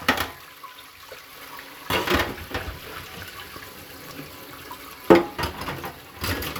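A recording of everyday sounds carries an electrical switching spike from 4.09 to 4.11 s: a sharp snap peaking around -20 dBFS, likely an arc from a nearby switch or motor coupling into the line. It appears as a narrow waveform spike and a thin full-height vertical stripe on a spectrogram.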